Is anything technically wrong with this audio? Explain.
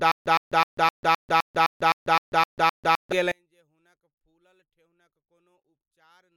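Yes, two faults are present.

From the start to 3.12 s there is a stutter with silent gaps, already under way when the clip begins. A 115 ms fragment of speech repeats 11 times, each followed by 143 ms of digital silence, for a steady 258 ms cycle. The likely cause is a stalled stream replaying its last buffer on each retry, so the speech that belonged in those gaps is lost.

From 3.32 s to the end, one channel is inverted. With one side's polarity likely reversed, the material common to both channels cancels when summed to mono. The centred speech drops by about 38 dB and nearly disappears.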